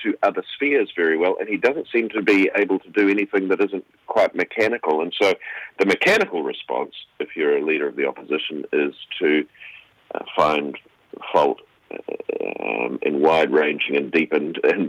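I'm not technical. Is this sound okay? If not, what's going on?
Yes, it's fine; nothing here needs fixing.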